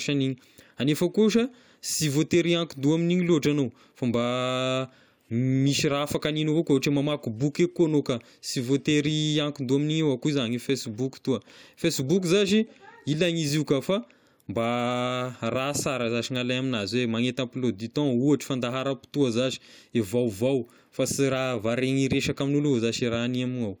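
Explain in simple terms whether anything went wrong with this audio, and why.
Nothing went wrong here: the speech carries no audible technical fault anywhere in the recording.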